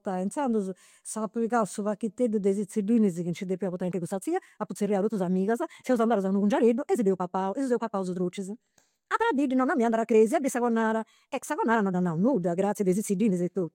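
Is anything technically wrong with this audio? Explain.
Yes. From 3.77 s to the end, a time-stretched section: software likely squeezed this stretch to about 1.51 times speed, dropping short pieces to keep pitch. The speech suddenly turns rushed while its pitch stays unchanged.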